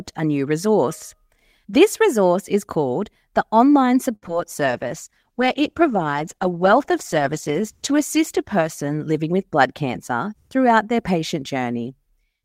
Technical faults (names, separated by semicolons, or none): short stall from a late packet; short concealed packet loss; call bitrate drop; jitter buffer speed-up